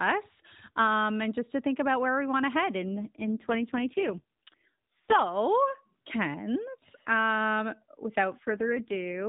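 Right after "we want to head", from 2.84 to 5.22 s, there's an AMR rate drop. The band stays put, but the speech turns buzzy and synthetic, which fits the AMR-NB codec falling from 12.2 to 4.75 kbps. It happens again from 8.38 to 9.27 s.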